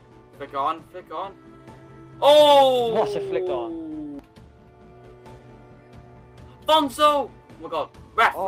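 No faults detected anywhere in the clip.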